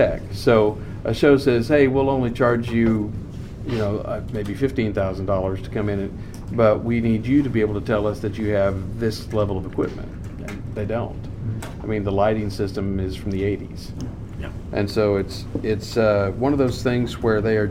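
Imaging from linear upsampling runs throughout: dulled top end, with faint mirror images roughly 40 dB down between 11 kHz and 22 kHz, consistent with a 22 kHz to 48 kHz conversion.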